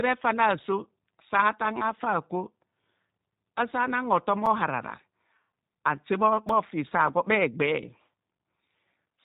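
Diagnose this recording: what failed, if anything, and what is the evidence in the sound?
The codec stage is at fault for the whole clip. The speech is cut off sharply at 3.8 kHz and has the rough, slightly synthetic quality of G.729 coding, which fits an 8 kbit/s voice link. This codec rebuilds each 10 ms frame from a vocal-tract filter, a pitch predictor and a few pulses, so the texture is damaged. A simple low-pass filter would remove the top end but leave the texture clean.

The driver or buffer stage has two blocks of digital silence, one at 4.46 s lasting 5.8 ms and one at 6.49 s lasting 2.9 ms. Each is heard as a tick with a hard edge, because the signal drops straight to zero with no fade. The lengths fit a 256-sample and a 128-sample buffer that were not filled in time. Network packet loss would differ: inside the codec, concealment would fill the hole with smeared sound instead of silence.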